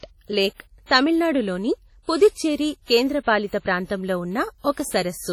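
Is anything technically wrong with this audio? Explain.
Yes. Throughout the speech, a washy, ringing smear trails each syllable, with hiss rising and falling with the signal. This is likely WMA compression: heavy quantisation in long transform blocks spreads noise across tens of milliseconds, pointing to a low bitrate. Unlike steady background noise, this hiss tracks the speech. Content stops above 19.3 kHz.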